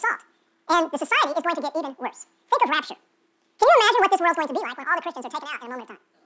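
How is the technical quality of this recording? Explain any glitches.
The quality has one big problem: a wrong sample rate, running for the whole clip. The speech plays exactly twice as fast and a full octave higher, consistent with 8 kHz audio played back at 16 kHz without conversion.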